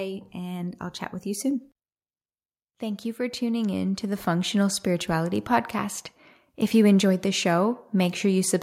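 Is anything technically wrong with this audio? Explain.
Yes. From 0.32 to 1.72 s and again from 2.65 to 6.03 s, the speech and background swell up together by about 4 dB, then about 9 dB: automatic gain rising, as the gain control judges the input too quiet and lifts it gradually.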